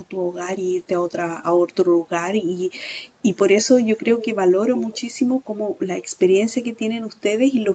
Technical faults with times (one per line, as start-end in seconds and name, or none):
4.21-4.26 echo leak
4.75-5.01 echo leak